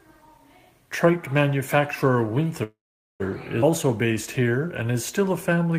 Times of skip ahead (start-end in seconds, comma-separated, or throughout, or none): 3.62-3.64